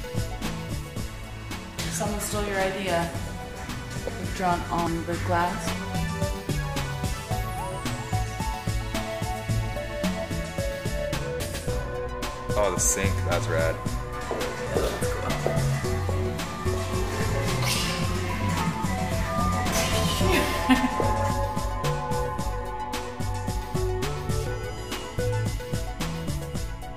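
Audio missing between chunks shows up as three abrupt skips at 4.87, 14.67 and 24.47 s, each dropping about a fifth of a second of sound and joining the two sides directly with no gap of silence. The jumps fall at a steady spacing just under ten seconds. This points to a recorder or processor likely working in 10-second blocks and losing a short piece each time it closes one block and starts the next.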